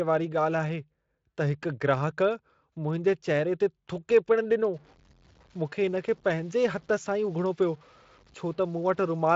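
From 4.74 s to the end at 9.36 s, the speech turns grainy and rough. The grit rides on the speech and changes with it. The likely cause is low bit depth without dither, with truncation to something like 8 bits. The error sits roughly 30 dB below the signal, under a Speex band that stops near 7.6 kHz.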